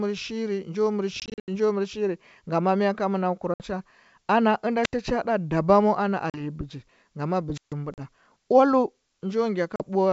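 From 1.2 to 1.49 s, packet loss on an ADPCM call cuts about 180 ms out of a 280 ms stretch in several gaps, the longest 80 ms. The same fault returns at 3.54 s (60 ms) between "ngama mɚ ka manakɚu" and "cha ana", at 6.3 s (40 ms) after "cha ɗa dabamu ana", and at 7.94 and 9.76 s (40 ms each). Each gap leaves the decoder's predictor and step size out of step with the sender's, so the speech comes back slightly distorted. On a waveform these are near-silent blocks with vertical edges, and on a spectrogram they are blank columns.

At 4.83 s a wireless microphone squelch dropout mutes the sound for about 76 ms just before "cha ɗa dabamu ana", and at 7.54 to 7.73 s another mutes it for 143 ms. As the FM signal fades, hiss swells into a broadband smear on the spectrogram before the squelch closes and the waveform falls to near silence.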